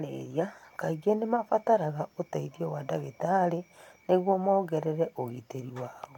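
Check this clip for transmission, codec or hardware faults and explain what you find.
Nothing stood out on listening; the speech came through without any audible problem.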